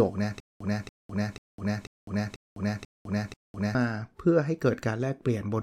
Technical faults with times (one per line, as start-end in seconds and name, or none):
0.40-3.75 stutter with silent gaps